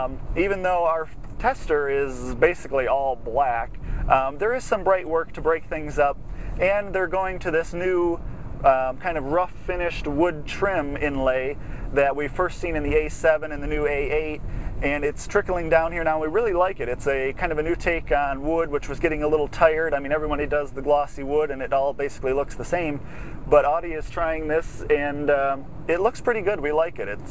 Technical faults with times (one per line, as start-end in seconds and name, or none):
none